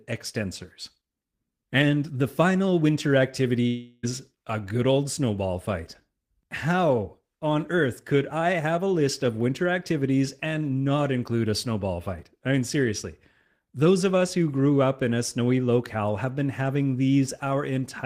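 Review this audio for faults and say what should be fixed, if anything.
From 3.67 to 4.05 s, after "the final winter", the speech turns into a fading synthetic buzz that lasts almost the whole gap. It then resumes at "a good old snowball" with about 360 ms of audio missing. The likely cause is a long network dropout, with loss concealment covering the gap. Redundant transmission such as FEC, or a path with fewer outages, would help prevent it.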